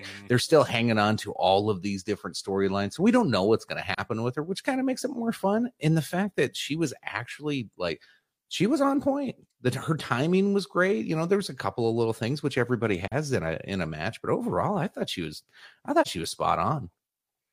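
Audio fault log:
3.94–3.99 s, 13.08–13.13 s and 16.02–16.08 s: AAC frame loss with muting. Each is a short hole of about 43 ms in the speech, which fits a single dropped AAC frame. The decoder fills the missing frame with silence, and because AAC frames overlap, the sound fades out and back in across the gap rather than cutting hard. That's why these sound like soft little dropouts.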